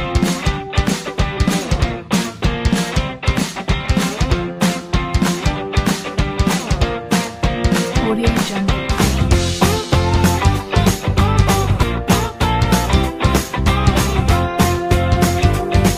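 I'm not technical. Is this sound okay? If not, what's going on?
No. There is an overlap between stream segments at 3.86 and 9.84 seconds, each heard as a tiny click or skip. The audio arrives in chunks, and here two chunks were stamped as sharing the same moment. The player trimmed that supposed repeat, but nothing was actually doubled, so a sliver of real sound, under 20 milliseconds, was thrown away and the sound jumps. The six-second spacing fits chunks about 2 seconds long.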